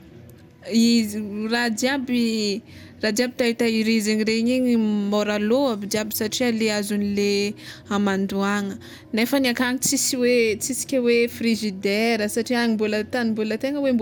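Throughout, the speech sounds swirly, smeared and hollow, with blurred attacks. This is generation loss, likely from about four re-encoding passes, consistent with MP2 at 128 kbit/s.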